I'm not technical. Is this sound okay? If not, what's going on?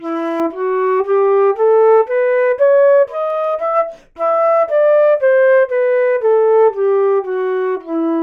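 No. Two things are wrong.

The first is de-emphasis applied wrongly. From 0.4 s to the end, the sound is dull and muffled, as if a blanket were over the speaker. A treble cut, meant to reverse a treble boost, was applied to audio that never had that boost, or was applied twice. So the high end drops away smoothly, and the crisp, bright detail is clearly weaker than it should be.

The second is CD scratch ticks. Between 3.30 and 3.59 s there are three small ticks, spaced evenly. Each is very brief, well under a millisecond. A scratch on a disc spoils a little data on each turn. The player cannot rebuild it, so it patches over the gap, and each patch leaves a tiny click.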